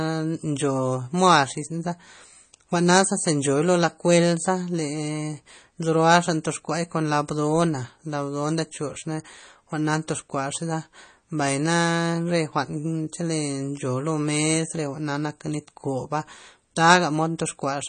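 From start to finish the speech sounds watery and swirly, with s sounds turning metallic and chirpy and consonant attacks smeared, while nothing is heard above 9.1 kHz. The likely cause is MP3 compression at a starved bitrate, one that fits roughly 32 kbps: the encoder cuts the treble at a fixed point and drops weak frequency lines, which flicker on and off from frame to frame and produce the plainly audible damage.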